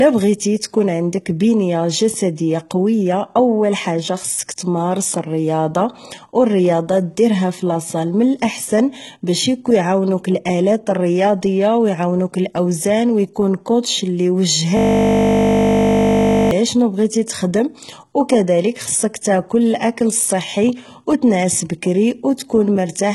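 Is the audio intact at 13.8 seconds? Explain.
No. At 13.83 s there is a pre-echo lasting about 18 ms. A transform codec spreads its quantisation noise across a whole coding block. Here a sharp attack arrived late in its block, so noise sized for that loud onset also filled the quiet stretch just before it. The result is a brief hiss leading into the attack, which loses its crispness and sounds softened and smeared.

This moment also carries the damage present across the whole clip, likely from HE-AAC compression at a low rate, consistent with roughly 16 kbps. That codec encodes only the lower spectrum and rebuilds the treble by copying lower bands upward under a coarse envelope. Nothing is present above 11.8 kHz, and the regenerated highs do not match the original harmonics. The damage is heavy, and s sounds in this speech come out gritty and metallic.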